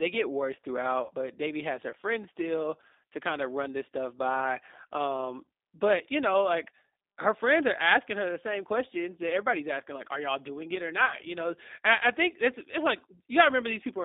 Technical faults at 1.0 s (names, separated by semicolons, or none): G.729 codec; VoIP packet loss concealed by the speech codec